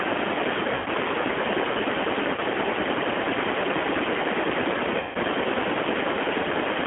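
From start to end the speech runs through the G.729 codec at 8 kbit/s. The band sits at about 250 Hz to 3.4 kHz, and the codec damage is plainly audible: a rough, slightly synthetic texture, because each 10 ms frame is rebuilt from a vocal tract filter, a pitch predictor and a few pulses. That texture is what separates it from simple telephone band-limiting, which would dull the sound without roughening it.

VoIP packet loss concealed by the speech codec then strikes three times: 0.74 to 0.88 s (about 120 ms of missing audio), 2.35 to 2.41 s (about 30 ms), and 5.00 to 5.17 s (about 150 ms). In each gap the decoder keeps repeating its last pitch and filter at falling gain. Instead of silence, you hear the sound stretched into a buzzy tone or a coloured noise that fades. The longer the loss, the more of this fade you hear. Unlike a plain dropout or a hard cut, the sound stays weak and smeared briefly after packets return, since each frame builds on the damaged one before it.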